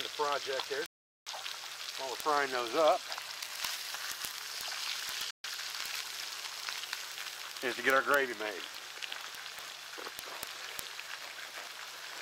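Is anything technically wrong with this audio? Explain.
Yes, there are two dropouts. From 0.86 to 1.28 s the audio cuts to silence for about 405 ms, and from 5.31 to 5.45 s it goes silent again for about 135 ms, each time picking up again afterwards. That pattern sounds like a Bluetooth stall: radio interference likely held packets up, the headphones' buffer emptied, and playback simply sat there until the retransmitted audio showed up.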